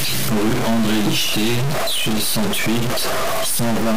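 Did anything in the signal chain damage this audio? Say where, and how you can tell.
Yes. A stuck bit runs through the whole speech clip, and the cause is likely a converter or a broken data line between it and the next stage. Roughly half the samples are shifted by a fixed step of about -15 dBFS, following the waveform, so loud passages turn harsh and buzzy. The pauses give it away: instead of falling silent they fill with noise, because that bit would normally change with the sign of small values near zero, and holding it stuck throws those samples off.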